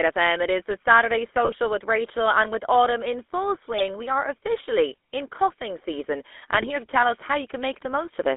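GSM full-rate codec, throughout the speech: the whole clip has passed through the original GSM vocal-tract coder, whose pulse-driven excitation, sampled at only every third point, gives the voice a buzzy, gravelly grain that fits a 13 kbps full-rate link. The band is cut to a narrow telephone channel from about 250 Hz to 3.5 kHz, so the low body and upper brightness are gone and the codec damage is plainly audible.

GSM bit errors, at 1.45 to 1.52 s, 3.78 to 3.87 s (after "with autumn in full", before "we are officially in"), and 6.57 to 6.70 s (after "officially in coughing season", before "to tell us how"): corrupted bits reached the decoder and garbled its filter, pitch and gain values. The spectrum twists and the level jumps for a moment, breaking the voice into squawks, pops and gargling. The longest burst, at 6.57 s, sounds like several consecutive frames were hit.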